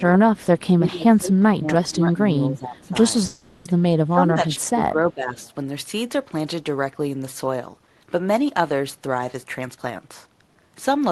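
Speech over a call path, with the band ending near 12 kHz as the Opus codec shapes it, and several faults. Speech suppressed in double talk pulls the voice down in three stretches: 0.00 to 0.39 s with a drop of about 20 dB, 0.78 to 2.95 s with a drop of about 15 dB over roughly one and a half seconds, and 4.07 to 5.38 s with a drop of about 20 dB over roughly a second. The likely cause is the echo canceller failing to tell the near talker from loudspeaker echo while both sides speak, so it ducks everything. What separates this from packet loss is that the voice is turned down while the far side talks, rather than breaking into glitches. An echo leak appears as brief faint scraps at 2.79 to 2.88 s and 5.40 to 5.49 s: a copy of the voice 378 ms late, about 35 dB and about 40 dB below the speech. Residual loudspeaker pickup that the far end's canceller let through is the likely source. Its fixed lag marks it as a discrete repeat rather than room reverberation, which would smear the sound instead of repeating it. 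A call audio freeze runs from 3.25 to 3.67 s, where about 400 ms of the last sound is stretched into a fading buzz before the audio picks up where it stopped. A jitter buffer that ran dry while packets were held up is the likely cause. Nothing is lost, and the audio simply falls 400 ms later, which is what distinguishes it from a dropout. From 9.44 s to the end, a jitter buffer speed-up plays the audio at 114% speed, cutting roughly 0.3 s as the receiver trims pitch periods to shed excess delay. The speech sounds hurried but keeps its pitch, unlike a resampling error, which would raise the voice as it sped up.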